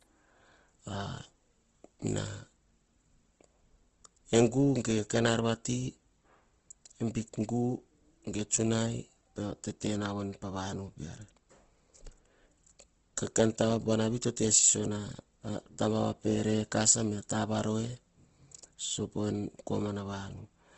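Opus compression was likely applied throughout the speech in its CELT music mode, at a rate that fits about 16 kbps. Bit-starved bands are filled with folded or noise content, so the sound turns rough and grainy, and nothing remains above 8.2 kHz.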